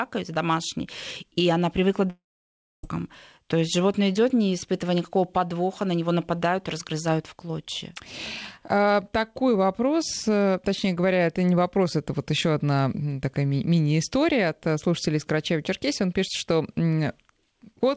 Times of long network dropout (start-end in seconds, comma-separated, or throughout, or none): 2.10-2.85